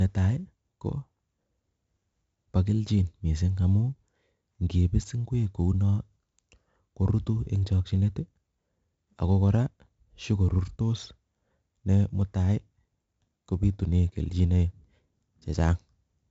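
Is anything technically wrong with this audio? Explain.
Yes, the speech carries 4-bit ADPCM compression damage from start to finish. Each sample is coded as a coarse 4-bit step from a prediction, so quantisation error rides with the level: gritty hiss over loud syllables, distortion on sharp onsets, and nothing above 7.7 kHz, which fits 4-bit samples at about 16 kHz. A spectrogram shows a hard ceiling and level-tracking noise filling gaps between harmonics.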